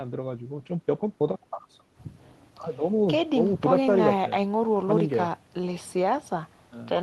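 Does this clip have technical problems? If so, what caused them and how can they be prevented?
No, the speech signal holds steady throughout, with no audible breaks, distortion or level problems, so there is nothing that needs preventing.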